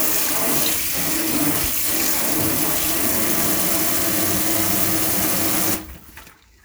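No technical faults can be heard anywhere in this audio.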